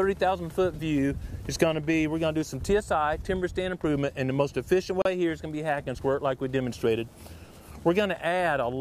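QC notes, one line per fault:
5.02 to 5.05 s, gap between stream segments: a 36 ms hole of pure silence cuts into the sound, with abrupt edges on both sides. Two adjacent segments, about 4 s long, do not quite meet in time. The player fills the space with silence, so nothing is lost, only delayed.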